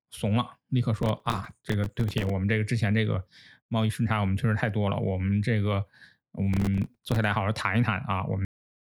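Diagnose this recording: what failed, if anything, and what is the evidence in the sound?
Gritty tearing crackle rides on the speech from 0.98 to 2.30 s and again from 6.53 to 7.16 s, then clears once each burst ends. This is processor overload crackle at the driver or buffer stage. The processor repeatedly missed its deadlines for very short buffers, which fits buffers of a few milliseconds. Each miss dropped a small slice of silence with hard edges, and dozens of these in a row fuse into the rough texture.

The recording stops abruptly at 8.45 s, mid-sound, falling straight to digital silence with no natural decay and a hard edge at the cut. This is a cut-off end at the storage or playback stage. The final buffers were never written or played out, so the speech is truncated rather than fading. The dead air continues to the end of the file.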